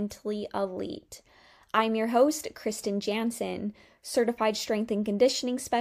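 A short speech recording with no technical faults. Nothing in it needs a timestamp or an explanation of cause.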